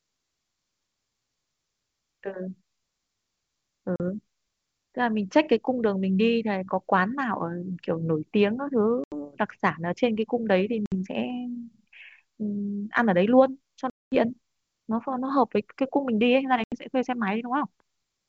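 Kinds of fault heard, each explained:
Packet loss on an ADPCM call: missing packets were replaced with silence, leaving the decoder's predictor and step size out of step with the sender's. The speech cuts out abruptly five times, the longest a 220 ms gap at 13.9 s, then returns briefly slightly distorted.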